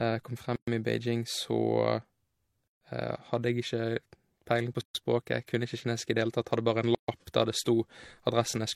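At 0.56 s, 2.68 s, 4.81 s (just after "peiling på") and 6.95 s (just after "tatt hadde bare en"), the speech drops into silence for about 116 ms, then 136 ms each time, repeating every 2.0 s: gaps at the joins of encoded pieces. Each piece kept its encoder's start delay and padded final frame, so the speech halts and resumes where it stopped. A spectrogram shows blank vertical stripes with slightly smeared edges; the waveform shows flat stretches.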